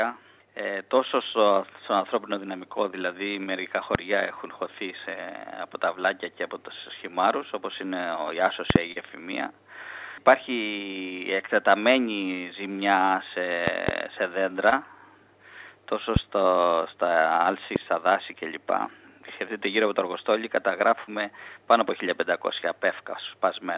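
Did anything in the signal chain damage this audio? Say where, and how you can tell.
Yes. Loud pops at 3.95 s, 8.70 to 8.78 s (double), 13.68 to 13.91 s (double), 16.16 s and 17.76 s, about 20 to 25 dB above the sound, likely electrical transients in analogue wiring or driver.

Short concealed packet loss at 8.92, 11.46, 14.69 and 21.04 s: network gaps of 20 to 40 ms, bridged by the receiver extending prior sound, heard as brief smears or wobbles.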